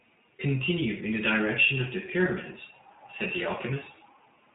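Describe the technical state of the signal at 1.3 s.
iLBC codec coding is present at 1.3 s, as it is across the whole recording. The signal is cut into short frames, which fits 20 ms frames, and each frame's excitation is coded on its own without drawing on the previous one. The texture points to the 15.2 kbps mode. Nothing above 3.8 kHz survives, so the speech sounds band-limited and muffled, and the codec damage is plainly audible as a rough, slightly synthetic graininess.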